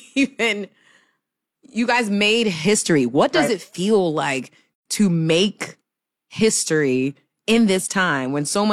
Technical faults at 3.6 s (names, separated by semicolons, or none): none